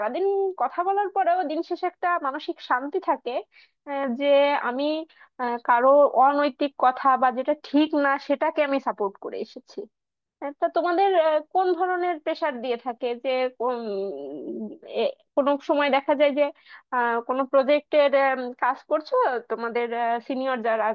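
No dropouts, distortion, noise bursts or timing errors turn up anywhere in this speech recording.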